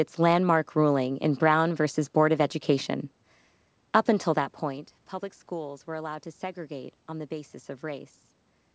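No technical faults are present: the speech keeps its normal call-path band limit at about 8 kHz with a room-noise floor, and the level shift around 4 s is only the talker moving relative to the microphone.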